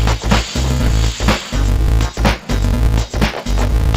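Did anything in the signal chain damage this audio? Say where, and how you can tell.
Yes. Interleaved audio read as planar, at the buffer stage, throughout. Dull, robotic sound with a 375 Hz buzz. That fits 2.67 ms blocks, likely 128 samples.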